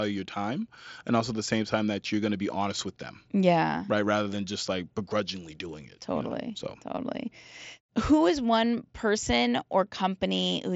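Concealed Bluetooth headset packet loss at 6.96 s interrupts this speech clip for about 15 ms, which fits two lost frames. The receiver covered the gap by repeating the best-matching stretch of recent waveform, leaving a brief buzzy patch and slight warble over the light grain of the mSBC headset codec.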